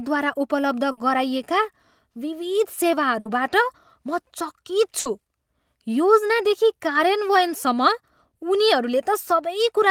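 Burst of packet loss at 0.91 to 1.00 s, 3.19 to 3.28 s and 4.99 to 5.08 s interrupts this speech clip. Each time, a short run of packets went missing or arrived too late, and the receiver covered the hole by extending the last sound it had for about 60 ms while fading it down. The speech then picks up again further along, with about 60 ms of the original skipped at each point.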